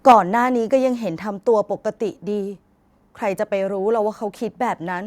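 From 0.08 to 0.15 s the speech hits microphone overload: the loudest syllable turns harsh and crackly, with peaks flattened. The likely cause is input volume set about 5 dB too high, so roughly a tenth of samples hit the converter's ceiling. Unlike a level drop, this adds distortion rather than changing loudness.

At 0.12 s, inside that distorted stretch, comes a microphone volume step-down: voice and background fall together by about 4 dB in one instant, with no added crackle. It likely comes from call software reacting to the clipping by cutting the device's input volume.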